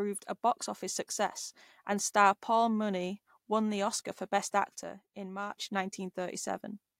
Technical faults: one channel drops out

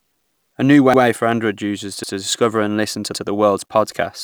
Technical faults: overlapping chunks

